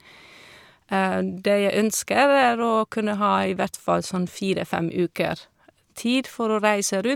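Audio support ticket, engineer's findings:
No audible fault found on this speech clip; nothing to attribute to capture, processing or playback components.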